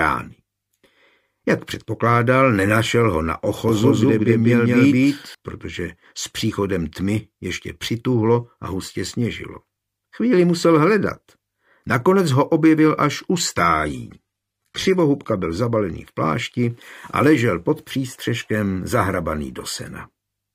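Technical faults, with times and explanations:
3.69–5.35 s, doubled audio track: an equally loud, uncoloured copy trails by about a fifth of a second, likely a second capture path; the waveform shows repeated, offset onsets starting and stopping abruptly.
13.55–15.55 s, adaptive stream at a lower bitrate: the treble suddenly vanishes above 13.3 kHz, which fits a switch from about 96 to 32 kbit/s AAC; the spectrogram shows a sharp-edged ceiling.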